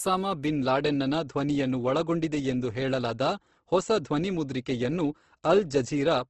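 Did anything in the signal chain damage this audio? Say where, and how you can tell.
Yes, at the codec stage. The speech is grainy throughout, and a spectrogram shows noise-filled bands with nothing above 12.1 kHz. That points to likely Opus compression at about 16 kbps.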